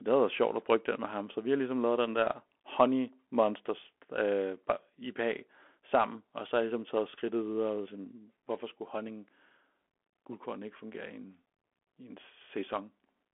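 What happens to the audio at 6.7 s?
At 6.7 s the speech is passing through the Bluetooth CVSD headset codec, as it does for the whole clip. The codec sends one bit per sample saying only up or down, with an adapting step, so loud high sounds outrun the step and smear, s sounds turn scratchy, and a granular hiss sits under the speech. Nothing is heard above 3.8 kHz, and the band runs from 250 Hz to 3.4 kHz. That granular, slope-limited grit is what separates it from clean telephone band-limiting.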